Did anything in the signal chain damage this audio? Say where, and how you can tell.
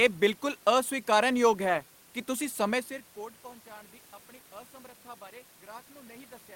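No, nothing in the signal chain damaged this audio, since the level rides smoothly like a fader and the room noise sits about 33 dB below the speech.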